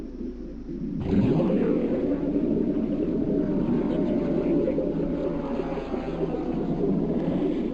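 A brief garbled flutter at 3.22 to 3.28 s and again at 7.31 to 7.38 s: frames out of order, where two neighbouring blocks, each about 32 ms, arrived swapped and played back exchanged, with no time lost.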